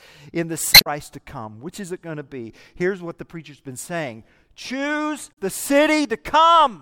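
Damaged data in a compressed stream corrupts the frames around 0.71 to 0.87 s and again from 5.29 to 5.38 s. The decoder misreads those frames and loses sync while hunting for a valid header, so each spot breaks the speech with a brief chirp, squawk, click or short hole.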